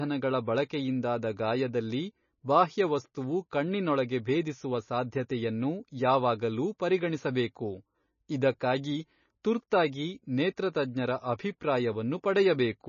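Throughout, the speech has nothing above 6.9 kHz and a watery, swirling texture as weak frequency content drops in and out, likely heavy MP3 compression at roughly 25 kbps.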